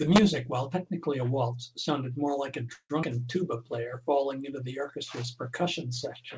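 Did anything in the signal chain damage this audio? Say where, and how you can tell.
Yes. Call audio freeze at 2.74–2.92 s, after "sounded more like a": network stage, likely packets held up, last sound stretched then about 50 ms silent, nothing lost.

Skip ahead at 3.02 s: network or jitter buffer dropped roughly 70 ms of speech, joining both sides almost directly with a tiny 9 ms fill.

Jitter buffer slow-down from 3.43 to 4.21 s, before "into the orchestra's": repeated pitch periods added 61 ms, so speech runs at 93% speed, same pitch.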